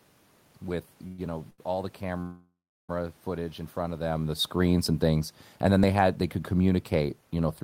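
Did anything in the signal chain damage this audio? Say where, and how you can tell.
Yes. From 1.07 to 1.20 s, and again from 2.21 to 2.91 s just before "footage in", the last sound is carried on as a fading fill and then resumes where it stopped. The second, 0.69 s long, decays to about 0.3 s of silence. This is likely a call audio freeze at the network and jitter-buffer stage, inserting gaps rather than losing audio.

A short stall from a late packet sits at 1.50 to 1.60 s. The jitter buffer ran dry for about 80 ms, so the receiver stretched the last sound until the packet arrived. That sound is held too long, with a slight buzzy dip, and nothing is skipped.

Automatic gain falling, in call processing, runs from 4.08 s to the end. The AGC pulled its gain down gradually, so the sound and its background sink together. A level change near 4.0 s is the talker moving, not the system.

Two jumps in the sound, at 4.86 s (a few milliseconds) and 5.84 s (roughly 15 ms), are likely dropped buffers (overrun) at the driver or buffer stage. 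Samples were overwritten before being read, and the surviving edges were spliced directly.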